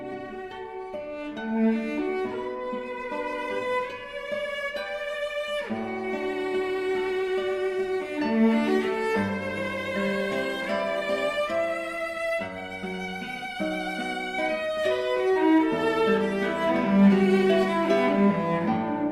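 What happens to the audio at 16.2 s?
Nothing goes wrong at 16.2 s; the audio plays through that moment intact, with no dropout, glitch or other fault.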